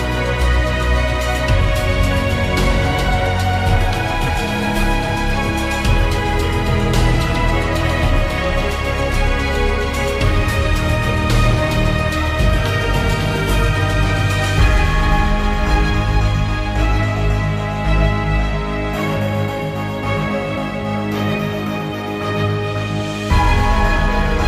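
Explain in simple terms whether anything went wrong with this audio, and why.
Nothing went wrong here; there's no glitch, dropout or distortion to point to anywhere in the recording.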